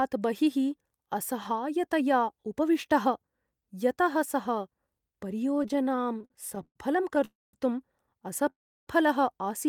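Packets reaching the receiver late or too slowly kept draining the jitter buffer between 5.55 and 6.77 s, causing repeated stalls (stutter). Twenty-one short gaps, the longest 124 ms, were bridged by extending the last sound, about 355 ms in all, so the speech drags and judders without losing anything.

A call audio freeze follows twice, likely from packets held up in transit. At 7.25 s the sound hangs for 281 ms, mostly silence; at 8.50 s it stops for 371 ms, about 330 ms silent, before resuming where it left off.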